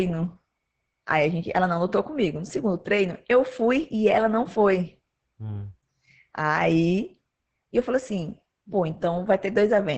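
Throughout this speech clip, Opus voice compression is running in its SILK linear-prediction mode with a wideband setting, and the heavy coding damage points to a bitrate of roughly 10 kbps. With so few bits, the excitation is coded coarsely and nothing survives above 8.6 kHz, so the speech sounds muffled, hoarse and faintly robotic from start to finish, lacking the crisp upper consonant detail.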